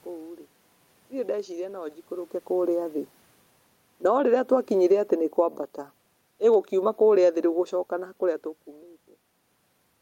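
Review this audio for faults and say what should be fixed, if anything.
Automatic gain falling shows up from 3.9 to 5.54 s and again from 6.31 to 8.53 s. The AGC decides the input's too hot and eases gain down about 4 dB, so speech and room noise sink together.

Automatic gain rising kicks in between 4.2 and 5.26 s, right inside that first drop. It pushes gain back up about 4 dB, so the level pumps down and up in quick succession.

To prevent it, lock the gain or give the AGC a slower release and a wider hold window, so it stops chasing the level shifts from the talker moving around 2 s and 8 s.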